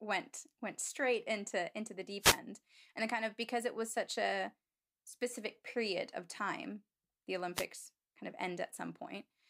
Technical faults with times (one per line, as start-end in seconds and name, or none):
2.20-2.39 wireless microphone noise hit
7.54-7.66 wireless microphone noise hit